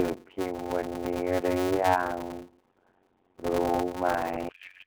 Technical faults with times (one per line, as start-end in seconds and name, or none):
0.00-4.87 block size mismatch (padded)
4.49-4.87 codec payload misread